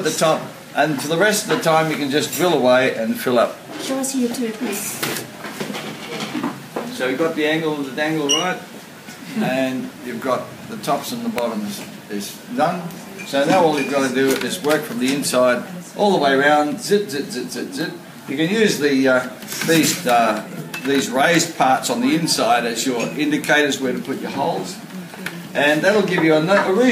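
At 11.38 s a single sharp snap, peaking around -5 dBFS, is likely an electrical switching spike: a nearby arc picked up by the line. It appears as one narrow waveform spike and a thin full-band vertical line.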